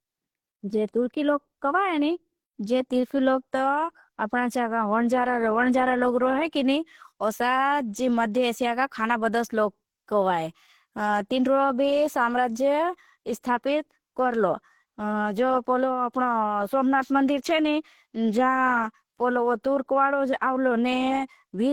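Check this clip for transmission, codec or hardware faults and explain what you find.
One fault runs through the whole speech clip: transcoding between lossy codecs, likely a low-rate Opus encode re-encoded as HE-AAC. The sound carries the different artefacts of both codecs heard together. A spectrogram shows smeared, blotchy high bands, with nothing above 18.5 kHz.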